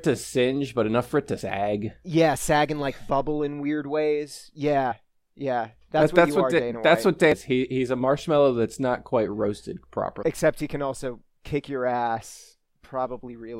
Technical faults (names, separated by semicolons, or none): damaged data in a compressed stream